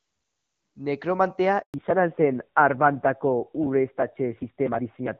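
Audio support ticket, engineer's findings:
Handover gap, 1.62 to 1.74 s: speech dies out fast, 120 ms of dead silence while the call switches networks. Waveform flatlines; spectrogram shows a blank vertical band.

Fallback to narrowband from 1.74 s on: call drops from HD Voice to a narrowband codec, at a rate that sounds like about 7.4 kbit/s. Sound turns dull and rough. Spectrogram shows a hard ceiling at 4 kHz, nothing above.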